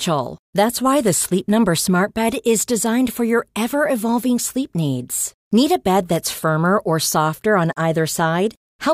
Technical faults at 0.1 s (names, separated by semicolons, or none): none